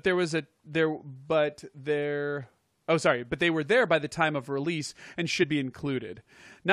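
At 5.42 to 5.44 s there's a compressed frame skipped: about one frame, roughly 23 ms, never gets decoded, so the speech jumps ahead.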